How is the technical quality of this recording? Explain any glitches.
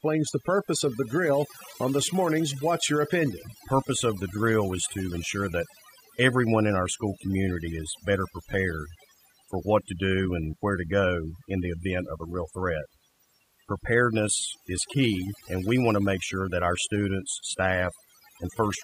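The technical quality is poor because of one fault that runs the whole way through. Overdone noise removal affects the entire speech clip. A noise reduction stage was set too hard. It shuts off frequency bands that sit near its noise estimate, taking quiet parts of the voice too. Pauses drop and break up into twinkling specks.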